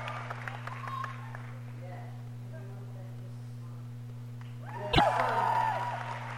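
At 4.90 s a short burst of damaged data in a compressed stream cuts into the audio. It lasts about 110 ms and ends at 5.01 s. Part of the encoded stream arrived wrong, with bytes lost or overwritten. The decoder misreads the frames there and loses its place. It then hunts for the next valid frame header before it can resume. The result is a brief chirp, squawk, click or short hole that breaks the flow of the sound.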